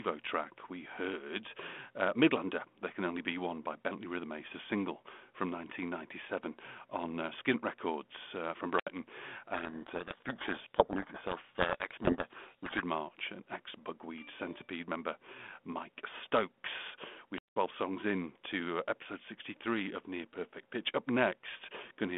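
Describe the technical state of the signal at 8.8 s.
The wireless microphone's radio signal faded until the receiver's squelch muted its output, causing a wireless microphone squelch dropout from 8.74 to 8.89 s, just after "uh from". Hiss swells briefly, then a 72 ms hole of near silence opens before the speech returns.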